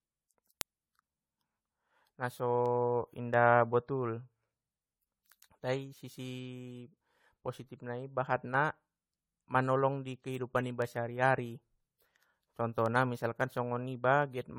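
Throughout, the speech sounds swirly, hollow and smeared, with blurred attacks: likely generation loss from roughly seven passes through a lossy codec, consistent with 64 kbit/s AAC-LC. From 0.61 s to 14.22 s, about twenty sharp ticks of uneven strength recur roughly every 0.7 s. These are word clock ticks: an unlocked receiver clock drifting by around 30 ppm drops or repeats one sample at each slip.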